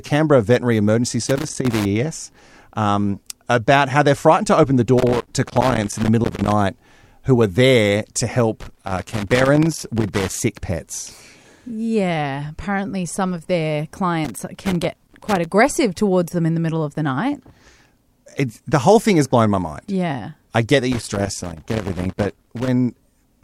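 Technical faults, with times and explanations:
1.27–1.86 s, 4.98–6.52 s, 8.61–10.40 s (after "who are there to"), 14.25–15.45 s (between "apparently some of their" and "towards them in the") and 20.92–22.68 s (after "I get that"): loose connector crackle. A worn contact keeps making and breaking. The speech is chopped into irregular bursts of scratchy crackle.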